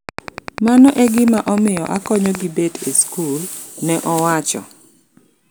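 From 0.09 to 2.36 s there's a train of clicks over the speech, about twenty of them at a steady 10.2 per second, poking roughly 10 dB above the signal and stopping just before "gi bet e skul". It's likely interference from nearby equipment or a faulty connection or power supply.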